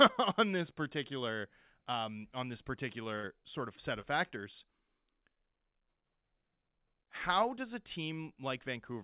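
At 3.16 to 3.25 s, between "particular um on this" and "sort of set", a burst of packet loss cuts in. The receiver stretches the last sound for about 70 ms, fading it down, then jumps ahead, so roughly 80 ms of audio is missing.

At 4.01 to 4.05 s, just after "sort of set", a short concealed packet loss appears as a brief smear. About 20 ms never arrived and was patched by extending the preceding sound before blending back. Throughout, the narrowband call path leaves nothing above 4 kHz, which fits G.711 mu-law.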